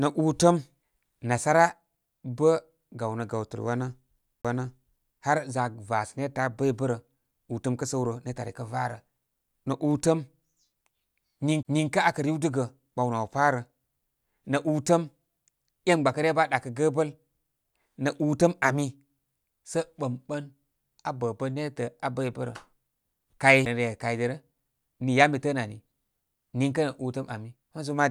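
A brief tick and dropout, with the speech resuming from a different point, occurs three times. Right after "gawnə gawtəl" there is a silence of about 30 ms from 4.42 to 4.45 s, a shorter one of about 20 ms from 11.63 to 11.65 s, and one of only a few milliseconds at 23.65 s. Each is a CD skip: a disturbance threw the laser onto another track of the disc's spiral, so the player muted briefly and resumed elsewhere.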